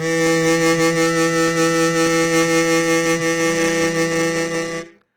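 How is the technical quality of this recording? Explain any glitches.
The technical quality is limited by plainly audible compression damage that runs through the whole music clip.

Opus compression, throughout: tones sound grainy, rough and noisy rather than clean. The likely cause is Opus in its CELT music mode at a bitrate that fits roughly 24 kbps. Short of bits, the encoder keeps each band's energy but fills the detail with folded or noise-like content. On a spectrogram the upper bands look speckled and diffuse, with few true holes and nothing above 20.3 kHz. The waveform looks normal.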